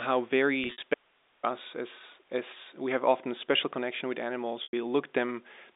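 A speech clip carried over a G.711 A-law telephone path, with the band held to roughly 250 Hz to 3.7 kHz. There is packet loss with pitch repetition twice. From 0.64 to 0.82 s, about 110 ms goes missing in pieces spread over 180 ms, the longest gap 60 ms. From 4.63 to 4.73 s, about 100 ms is lost. The receiver fills each hole by repeating the last pitch period, fading it out over about 50 ms. An audio dropout to a faint residue runs from 0.94 to 1.43 s, nearly half a second. The sound cuts off abruptly and the gap holds only hiss, about 40 dB below the speech. The line stayed live while the wanted signal stopped, likely a break upstream of the final stage.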